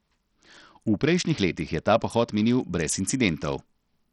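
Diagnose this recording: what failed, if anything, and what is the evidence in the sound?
Bluetooth SBC compression, present throughout the speech: the treble drops out and flickers, with gritty noise and aliasing riding on top. This is a codec-stage fault, likely SBC starved of bits, which fits about 64 kbps, leaving the upper sub-bands nearly empty.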